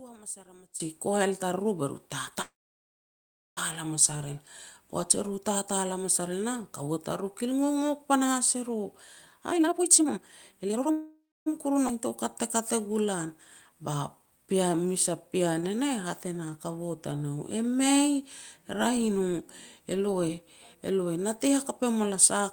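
This is a speech clip with a run of network and playback faults. Right at the start, from 0 to 0.8 s, the level sits about 21 dB low and sounds faint. That likely points to one channel inverted: with one side's polarity flipped, everything common to both channels cancels when they're folded to mono, so the centred voice mostly disappears and only the small difference between the channels is left. Then at 2.41 s there's a call audio freeze running to 3.59 s. The last bit of sound gets stretched out briefly and then drops to roughly a second of silence before the speech picks up exactly where it left off. The likely cause is packets held up in transit so the jitter buffer ran dry. Nothing is lost, but about 1.15 s of gap gets inserted and the whole conversation shifts later by that much. From 9.47 to 10.91 s there's a jitter buffer speed-up, and it's a strong one. The speech plays at about 162% rate with the pitch unchanged, so it sounds rushed and clipped. 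That's the receiver snipping out short pitch-period chunks over and over to burn off a backlog, roughly a second's worth here. Straight after, from 10.91 to 11.48 s, comes a second call audio freeze. It's the same pattern on a smaller scale, a held sound and then about 0.27 s of silence, adding roughly 0.55 s of delay and again likely down to late-arriving packets. At 11.88 to 11.91 s the audio does a skip ahead, jumping forward with almost no gap. Roughly half a second of speech simply isn't there, and the two sides are spliced nearly edge to edge, which happens when audio gets dropped while later material is already queued. Then there's a long jitter buffer slow-down from 12.08 to 17.70 s. Speech runs at about 92% speed at normal pitch, a bit drawn out, as the receiver repeats single pitch periods and slivers of pauses to rebuild its reserve, adding about 464 ms in total. Inside that stretch, at 15.61 to 15.64 s, there's a short stall from a late packet: one sound is held a touch too long with a slight buzzy dip, covering about 18 ms while the receiver waited, then it carries on from the same spot with nothing missing. 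Finally, from 19.27 to 21.07 s, there's a second, much gentler jitter buffer speed-up at about 107%, trimming roughly 150 ms. It sounds hurried, and it's the same pitch-period trimming as the earlier one.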